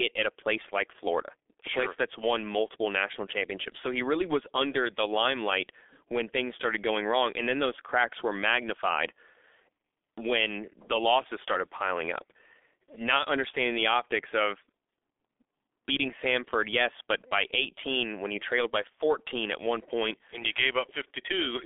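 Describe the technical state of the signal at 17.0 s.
At 17.0 s, as throughout, speech sounds muffled and hoarse with smeared consonants: heavy G.723.1 codec damage, nothing above 3.7 kHz, coarse frames fitting roughly 6 kbit/s.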